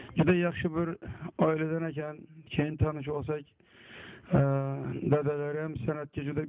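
No technical faults can be heard anywhere in the clip.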